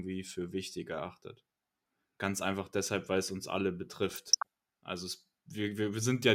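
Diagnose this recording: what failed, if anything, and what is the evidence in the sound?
The network stage failed under weak reception, giving DAB burbling from 4.09 to 4.46 s, just after "weil es uns alle". Residual bit errors near half a percent corrupt MP2 samples and scale factors, so single sub-bands jump for up to a frame. A spectrogram shows scattered, short, band-limited blocks flaring.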